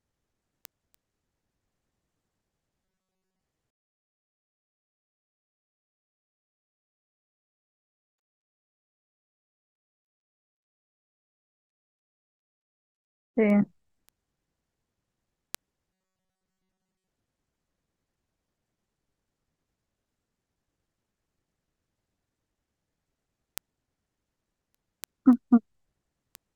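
From 2.85 to 3.41 s and 15.93 to 17.08 s, robotic sound from repeated short buffers turns the speech into a rigid metallic buzz locked at 188 Hz, likely from a roughly 5.3 ms buffer looping over most of the audio. Unlike dropouts, the words continue without silent gaps.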